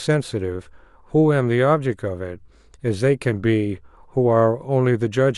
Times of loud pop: none

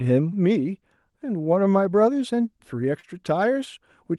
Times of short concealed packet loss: 2.99-3.06

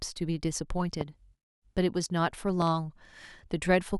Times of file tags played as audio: none

